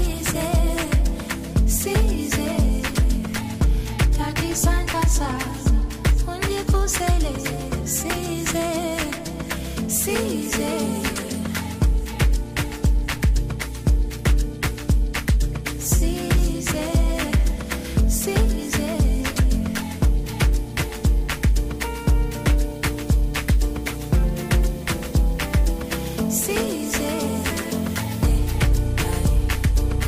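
Nothing stood out as a technical fault on listening.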